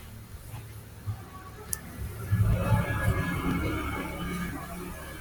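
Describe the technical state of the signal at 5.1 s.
At 5.1 s the speech signal is intact, with no dropout, distortion, glitch or other fault audible at that moment.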